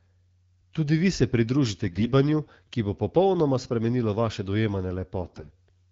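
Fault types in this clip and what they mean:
AMR bit errors: Some of the less protected bits in the coded speech frames arrived flipped, but the frames were still decoded. The excitation pulses land in the wrong places. The fine pitch, gain and spectral values drift. The speech keeps roughly its pitch and level but turns hoarse, scratchy and gargly. This happens from 1.88 to 2.12 s, right after "vi se pridružite", and again from 5.22 to 5.49 s. The roughness suggests around a tenth of the bits were hit.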